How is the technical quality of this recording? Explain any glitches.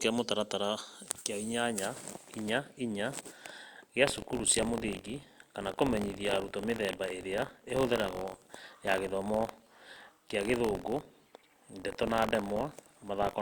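The recording has one sustained fault. Buffer tearing starts at 4.05 s and runs to the end of the clip. The playback writer and the hardware reader have drifted out of step, so in every period a small slice, roughly a twentieth of each buffer, holds speech from about 40 ms earlier, hard-spliced on both sides. Those joins repeat at 46.9 Hz, which fits a 1024-sample buffer, and are heard as a steady robotic buzz riding on the speech wherever there is signal.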